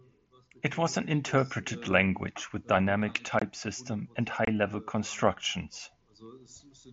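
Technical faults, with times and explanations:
0.52–1.61 s, automatic gain rising: the gain control judged the input too quiet and lifted it by about 3 dB, so speech and background swell together before "language with".
3.39–3.42 s and 4.45–4.48 s, unconcealed Bluetooth headset packet loss: about 22.5 ms of headset audio went missing with nothing filled in, consistent with three lost frames, leaving abrupt holes near "system and" and before "level constructions".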